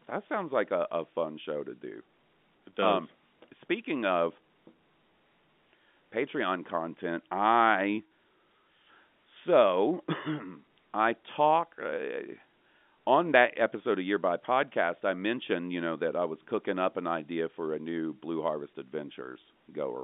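Nothing in this speech clip stands out as a technical fault. It comes over G.711 telephone coding, which holds the sound to a band of about 200 Hz to 3.6 kHz and leaves at most a faint trace of its own coding noise.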